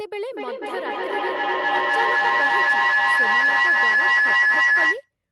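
From 0.32 s to 5.14 s, a feedback howl builds near 2 kHz, with the loop repeating about every 300 ms and the howl peaking around 12 dB above speech, as the microphone-loudspeaker loop keeps gaining.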